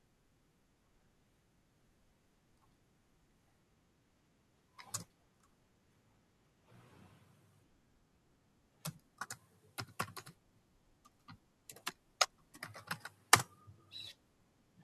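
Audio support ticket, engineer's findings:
Nothing to flag on this speech recording; listened all the way along and found no issue to log.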